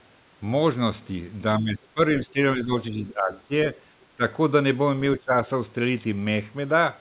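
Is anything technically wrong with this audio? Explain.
Yes. The speech is repeatedly ducked at 1.61–1.99, 2.27–2.38, 2.56–2.72, 2.91–3.52, 4.17–4.22 and 5.19–5.35 s, by about 10 to 20 dB. This is likely speech suppressed in double talk: the echo canceller mistakes speech overlapping far-end sound for echo and attenuates both. The 4 kHz band limit throughout fits a 64 kbps G.711 call path and is not part of the fault.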